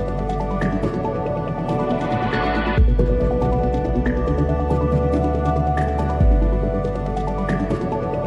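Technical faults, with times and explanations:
2.62–4.27 s, imaging from linear upsampling: straight-line interpolation, pointing to 24 kHz raised to 44.1 kHz, dulls the top and leaves mirrored images at 12–24 kHz, roughly 55 dB down, adding metallic shimmer.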